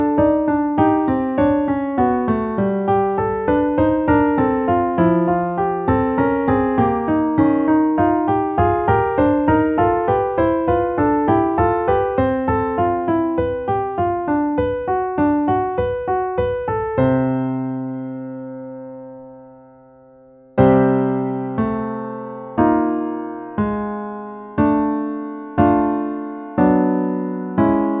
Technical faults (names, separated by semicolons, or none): none